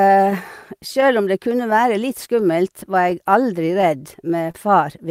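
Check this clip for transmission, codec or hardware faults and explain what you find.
Two transmission faults are audible: a timing drift that runs through the whole recording and one brief stall near the end.

Clock drift between sender and receiver is present throughout. The sending side's clock runs about one and a half percent slow, so the receiver's jitter buffer keeps draining and has to repeat short fragments to stay fed. The speech carries small, irregularly spaced timing hiccups from start to finish.

A short stall from a late packet occurs from 4.51 to 4.55 s. A packet arrived after it was due, the buffer briefly ran dry, and the receiver held the preceding sound for about 24 ms before resuming where it left off. Nothing is lost, but that moment lingers slightly too long with a slight buzz or dip.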